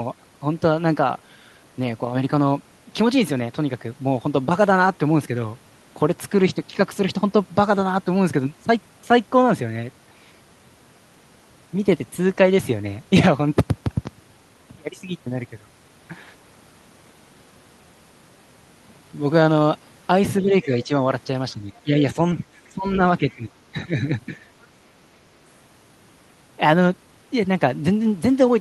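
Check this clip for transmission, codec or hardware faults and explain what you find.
Two faults appear, both in the stretch from about 20.4 to 24.1 s.

Speech suppressed in double talk occurs at 20.42–20.90, 21.52–22.17, 22.38–22.44, 22.72–23.00 and 23.22–24.06 s. The talker's level sags in uneven bites, dropping by about 5 dB in the lighter dips and about 10 dB in the deeper ones. This is likely an echo canceller that heard both sides at once and, unable to separate them, attenuated everything. Unlike network dropouts, the sound never vanishes into silence. It ducks only while the far end is active.

The other side's voice leaking through appears as a brief scrap at 23.30–23.36 s, sitting about 30 dB below the talker. It is faint and clipped short. The likely cause is far-end audio from the loudspeaker that the canceller failed to fully remove from the microphone pickup. It differs from crosstalk or a mixing error because it arrives in the middle of the suppression episode, as a fragment of a second voice rather than a steady background layer.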